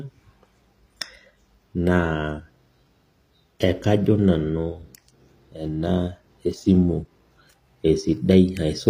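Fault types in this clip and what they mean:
HE-AAC compression: The treble sounds synthetic, and s sounds come out gritty and metallic. Nothing reaches above 15.4 kHz. The likely cause is band replication rebuilding the top from copied lower bands, which fits a low bitrate near 24 kbps.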